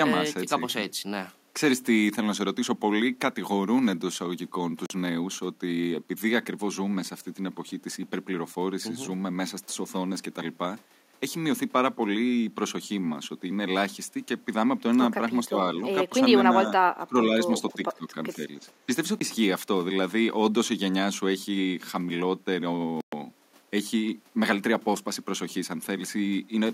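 At 4.86 to 4.90 s the speech drops to dead silence for 43 ms, then carries on. This is a Bluetooth stall, likely from interference holding up packets until the headphones' buffer ran dry. The hard, clean gap sets it apart from a level dip.

Between 15.48 and 18.42 s the speech is repeatedly pulled down rather than silenced, the hallmark of speech suppressed in double talk. There are short dips at 15.48 and 16.09 s, then longer ones at 16.98 to 17.38 s, the deepest at about 20 dB, and at 17.76 to 18.10 s, with a slight dip at 18.35 s. The echo canceller, likely unable to separate the talker from loudspeaker echo during overlapping speech, turned both down.

Two more stalls follow: a brief 18 ms gap at 19.19 s and a longer 120 ms silence at 23.01 to 23.13 s.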